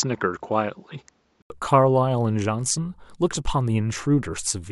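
Input switched to a poorer device, 0.0 to 1.5 s: speech stops above 7.6 kHz, likely a narrower-band microphone, with an 80 ms gap at the switch.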